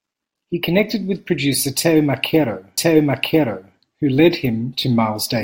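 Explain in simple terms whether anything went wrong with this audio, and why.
A stream segment repeated: from 2.77 to 3.76 s, about one second of the speech plays a second time, with a small blip where it jumps back. The player fetched or queued the same chunk of the stream twice, so that stretch is heard again.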